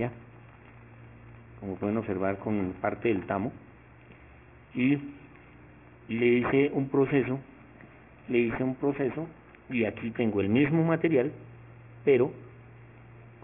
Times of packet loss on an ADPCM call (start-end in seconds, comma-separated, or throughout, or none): none